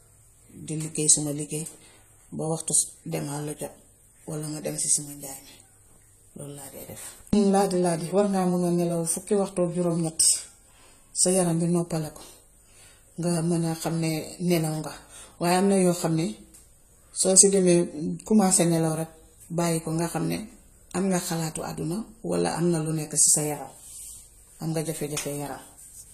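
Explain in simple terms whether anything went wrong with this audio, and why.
Yes, something went wrong, and it lasts the whole recording: the speech has a dull, smeared sound with a fizzy, warbling edge on hissy consonants, and nothing reaches above 14 kHz. The likely cause is AAC compression squeezed hard, which drops the quietest detail to save space and patches some gaps with noise. A simple treble cut would only sound muffled, whereas here the sound also gains that restless, bubbly texture.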